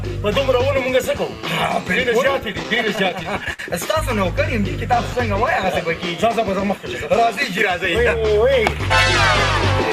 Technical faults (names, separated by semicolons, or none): repeated stalls (stutter)